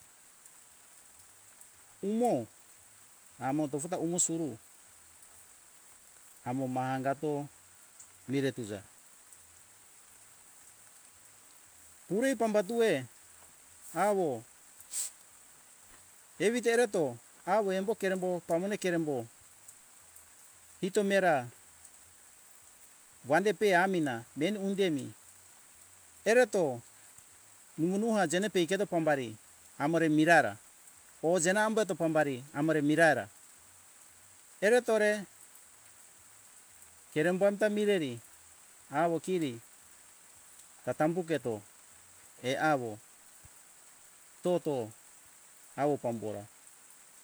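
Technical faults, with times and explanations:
No technical faults can be heard anywhere in the recording.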